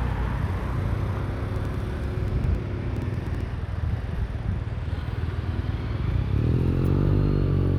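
The clip is a recording of everyday sound with a train of clicks from 1.56 to 3.42 s. About fifteen sharp clicks arrive at roughly 7 per second. Their spacing is irregular, not a steady tick. Each click has much the same shape. They peak at about the level of the sound itself. The likely cause is interference from nearby equipment or a faulty connection or power supply injecting repeated pulses.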